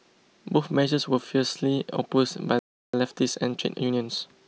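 A playback stall interrupts this speech clip at 2.59 s, where the sound cuts to silence for about 0.34 s before resuming at 2.94 s. The likely cause is the player running short of buffered data, or its output thread being blocked, leaving nothing to send until it recovered. Time-compressed catch-up follows from 2.94 s to the end. The player trims its accumulated backlog by removing small slices and cross-fading the joins, so the speech runs about 1.1 times faster at unchanged pitch.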